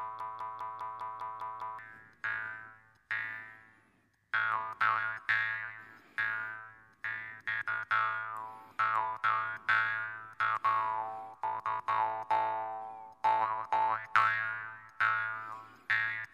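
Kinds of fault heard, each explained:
Broken-record loop: from the very start until 1.79 s, a 0.2 s fragment repeats exactly eight times back to back, likely because playback or the stream stalled and kept resending its last piece. Unlike an echo, each repeat is identical and undecayed, and the audio it replaced is lost.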